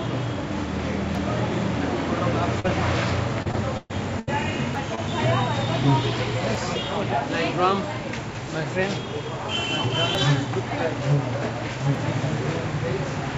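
Audio missing between chunks first appears at 1.15 s. About a fifth of a second of sound simply drops out, and the audio on either side is butted together with no silence, so the sound jumps forward. The same skip recurs at 4.75, 6.55, 8.35, 10.15 and 11.95 s, a regular spacing of roughly 1.8 s. That regularity likely points to a recorder or processor handling the audio in fixed chunks and losing a slice at each handover.

Short concealed packet loss occurs from 2.60 to 2.66 s, where 40 ms of audio never arrived in time. The receiver covered the hole by extending the preceding sound and then blending back into the real signal, which leaves a brief smear in the sound rather than a clean gap. A second, smaller instance at 4.95 to 4.99 s patches 20 ms the same way and is heard as a quick blur.

Repeated packet loss, producing a robotic sound, runs from 3.42 to 4.29 s. Four separate holes fall inside this stretch, the longest 122 ms, and about 29 percent of the span is synthetic fill. 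Each gap is papered over by stretching the last sound before the next loss arrives, so the passage turns choppy, with pieces missing. All of this rides on a G.722 call path at 64 kbps, which contributes nothing above 8 kHz.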